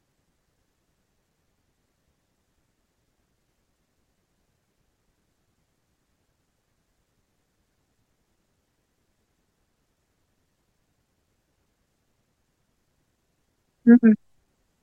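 Speech recording with nothing technically wrong to report in it.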